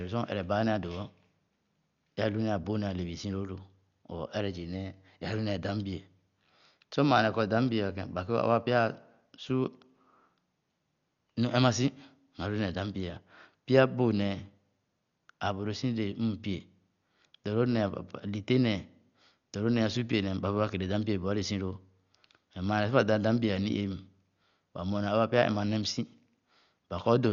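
Dolby Digital compression, throughout: the speech is dull, with nothing above 6.9 kHz and rough, fluttering noise, likely from heavy coding at a very low bitrate near 48 kbps.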